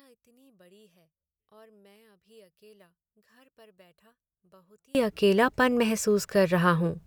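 One channel inverted, from the start to about 4.95 s: the speech drops by about 35 dB, collapsing to a faint residue in which the centred voice almost disappears. The likely cause is one stereo channel carrying reversed polarity, so that when the two sides are summed to mono the material they share cancels, leaving only the small difference between them audible.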